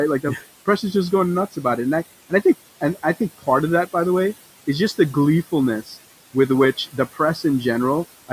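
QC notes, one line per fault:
Throughout: noise suppressor artifacts. The room noise, sitting about 18 dB below the speech, is pulled down by about 17 dB wherever the suppressor decides a band holds only steady noise, so the background sinks in the gaps and comes back up under each phrase. Unlike a clean gate, the pumping follows frequency bands frame by frame rather than switching the whole signal.
0.23–0.47 s, 5.85–5.97 s, 6.77–7.37 s: speech cut by the noise suppressor. In each span the suppressor mistook quiet parts of the speech for background and turned them down with it, by as much as about 15 dB, 12 dB and 17 dB respectively, across roughly a tenth of a second in the first two and around 150 ms in the last. The affected speech there sounds swallowed or faint, so this is lost speech, not a dropout.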